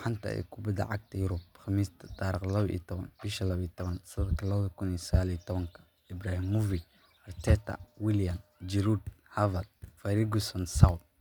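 No technical faults are audible.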